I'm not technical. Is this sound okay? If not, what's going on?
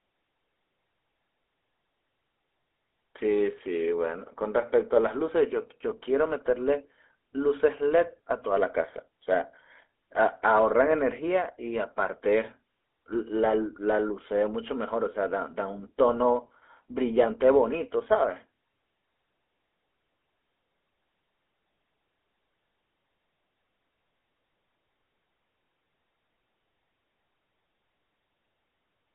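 No. From start to finish the speech has gone through the GSM full-rate codec, the method early mobile phones used to squeeze voices down. It passes only about 300 Hz to 3.5 kHz, so voices sound thin and boxy. It also rebuilds each voice from a simple buzz-like source, which adds a clearly audible gravelly roughness. A plain telephone-style filter would sound narrow but smooth. This grainy buzz is what gives away the GSM codec.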